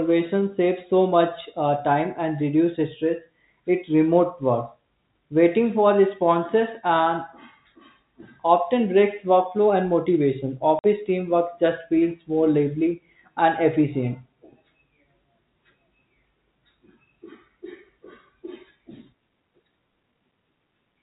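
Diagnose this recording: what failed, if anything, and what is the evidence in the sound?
The network stage failed: packet loss filled with silence. At 10.79 s the speech drops out completely for 50 ms, ending at 10.84 s, with hard edges at both ends of the gap. A 50 ms hole fits several consecutive packets going missing, about five if each carried 10 ms of audio. The receiver had no concealment and simply played silence in their place. The G.711 telephone band, capped at 4 kHz, is heard on both sides of the gap.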